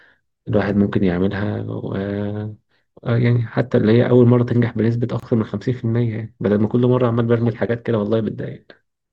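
At 5.20 s the speech drops into a gap at a join of encoded pieces, about 28 ms of silence lasting until 5.23 s. The audio appears to have been encoded in separate pieces, which fits segments about 6 s long, and then joined without trimming, so the encoder's start-up delay and last-frame padding remain at the seam. The result is a brief hole with smeared edges, after which the speech resumes exactly where it broke off.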